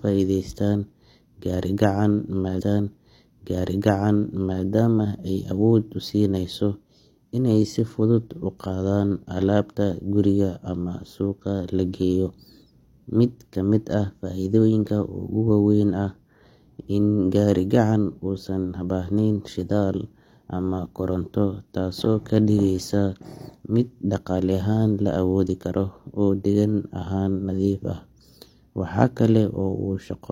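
At 2.56 s a stream segment repeated: about 2.04 s of speech replays until 4.60 s, entered through a small blip, unlike a stutter's short loops.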